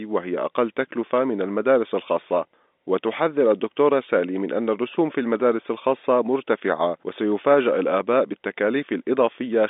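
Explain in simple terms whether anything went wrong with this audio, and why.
Nothing went wrong here.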